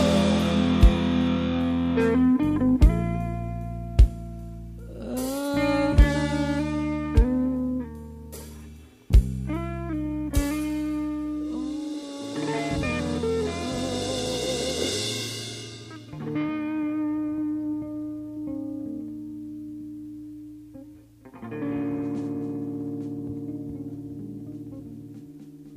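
Nothing in the audio stood out as a technical problem on listening.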